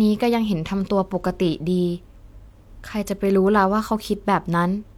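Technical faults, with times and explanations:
No technical faults can be heard in this speech recording. Nothing in it calls for a time or an explanation.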